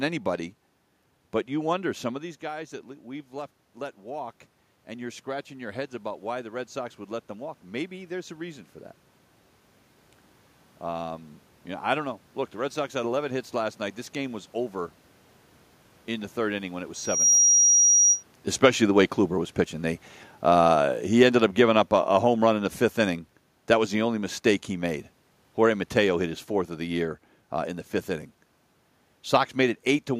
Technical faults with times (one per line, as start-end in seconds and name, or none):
16.94-18.23 loudspeaker feedback squeal
20.33-27.13 automatic gain falling